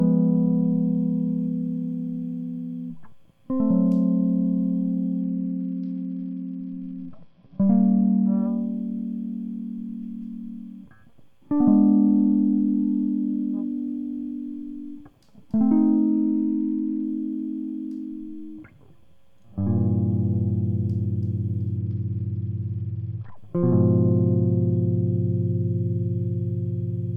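Bluetooth SBC bit pool drops at 5.21 to 8.37 s, 16.10 to 17.02 s and 21.78 to 23.37 s: the link's coding budget fell sharply, fitting a cut from bit pool 31 to 9 (roughly 72 kbps), starving the upper sub-bands, so the music turns dull and gritty until quality returns.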